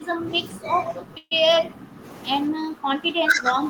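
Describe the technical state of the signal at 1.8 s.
At 1.8 s the speech is still being pulled down, with level dips of about 10 dB. This is speech suppressed in double talk, running from 0.0 to 2.04 s, likely an echo canceller attenuating the near talker while the far side also speaks.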